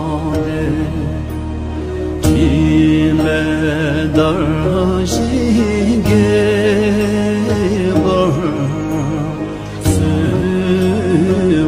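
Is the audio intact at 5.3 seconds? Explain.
Yes, the audio at 5.3 seconds is intact, with no dropout, click, distortion or other fault at that point.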